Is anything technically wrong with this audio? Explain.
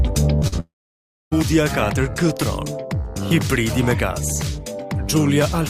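Yes. The sound has two short concealed packet losses and one long network dropout, all within its first one and a half seconds.

The short concealed packet losses come at 0.39 to 0.44 s and 0.48 to 0.54 s, covering about 20 ms and 40 ms of missing audio. In each gap the receiver extended the preceding sound and then crossfaded back, so each is heard as a brief smear or wobble. On a spectrogram each shows a short patch of smoothed, repeated texture.

From 0.60 s to 1.33 s the audio breaks off for about 0.72 s. A fading continuation of the last sound is followed by roughly 0.63 s of silence, and the audio then resumes with that stretch lost. This is likely a long network dropout. On a spectrogram it appears as a decaying smear and then a blank band. The waveform collapses to a flat line before the signal returns.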